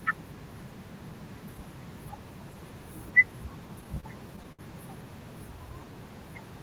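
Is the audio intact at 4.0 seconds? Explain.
No. From 3.81 to 4.61 s the speech drags and stutters through seven short stalls, the longest 65 ms, each bridged by holding the last sound. This is repeated stalls (stutter): late packets kept draining the jitter buffer, so 141 ms was filled, with nothing lost.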